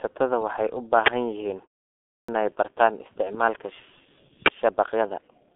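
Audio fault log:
throughout: G.723.1 codec. The whole recording is band-limited and coarse: nothing survives above 3.7 kHz, and the line band sits roughly between 250 Hz and 3.5 kHz, so the speech is muffled and lacks brightness. At a rate that fits about 6.3 kbit/s, the codec's slowly updated voice model smears rapid changes, which leaves the voice hoarse and the consonants blurred. The damage is heavy across the full clip.
2.20–2.28 s: clipped start after a pause. After a 0.61 s silence, the output takes about 85 ms to wake and lock before it passes audio again. The onset of "bartaan isticmaalka" is swallowed as a result. The word begins abruptly, cut in mid-attack out of silence, and its first sounds are missing, not faded in.
4.46 s: uninitialised buffer. A single 20 ms block goes out before any valid audio has been written into it, so whatever leftover memory contents were in the buffer are played as sample values. 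The result is a brief, loud burst of harsh digital noise that has nothing to do with the speech around it. It ends just as suddenly as it starts.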